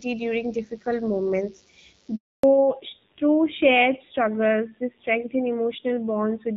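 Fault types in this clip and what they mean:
DECT cordless phone buzz: A nearby DECT handset or base station sends a radio burst every 10 ms, and the audio circuitry rectifies it into the signal. A thin, steady 100 Hz buzz rich in harmonics sits under the speech throughout, very faint, around 40 dB down.
handover gap: The call was switched from one network to another, and no speech frames arrived during the transfer. Just after "during difficult moments" the voice dies away within tens of milliseconds and stays silent for 280 ms, from 2.16 to 2.43 s, losing whatever was said.
fallback to narrowband: After the handover the call dropped from HD Voice to an older narrowband codec. The roughness fits AMR-NB at 7.4 kbit/s. From 2.43 s onward nothing above 4 kHz remains, and the voice sounds duller and rougher than the wideband opening.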